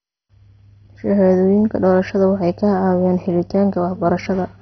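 Right through the speech it's dull, with nothing above 6.1 kHz and a gurgly, grainy edge, likely heavy MP2 compression starving the upper sub-bands, which fits a bitrate around 32 kbps.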